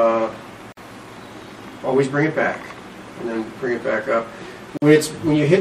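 Two gaps at a join of encoded pieces break the continuous sound, at 0.72 to 0.77 s and 4.77 to 4.82 s, each about 48 to 49 ms and 4.0 s apart. Separately encoded pieces were joined untrimmed, so encoder start delay and final-frame padding remain, opening a short silence before the sound resumes where it stopped.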